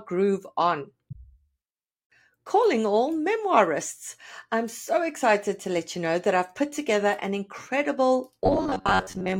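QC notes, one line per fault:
8.44–9.39 s, robotic sound from repeated short buffers: the speech turns into a rigid, metallic buzz fixed at 93.8 Hz that still tracks the syllables loosely. That pitch has a period of about 10.7 ms, which points to a short chunk being replayed over and over. The likely cause is new audio arriving too slowly, so playback loops the last buffer while roughly half of the real signal is dropped.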